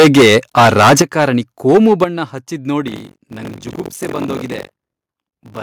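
From the start to 1.25 s the speech is harshly flattened and crackly on its loudest syllables. This is microphone overload, likely from an input volume set far too high, with peaks driven about 15 dB past the converter's limit and roughly 15% of samples clipped. Unlike codec distortion, the grit follows level, not content. At 1.02 s the microphone volume is stepped down by about 10 dB. Voice and background fall together in one instant, which points to a device gain change rather than a fade or noise gate. Overload returns more mildly from 1.69 to 2.04 s, about 6 dB over, and at 2.04 s a second step down of about 9 dB follows. From 2.86 s to the end a steady robotic buzz at 46.9 Hz rides on the sound, which fits a 1024-sample buffer. This is buffer tearing: roughly a fifth of each period replays audio from about 70 ms earlier, with hard joins on either side. It differs from dropouts because nothing goes silent, and it disappears wherever the signal stops.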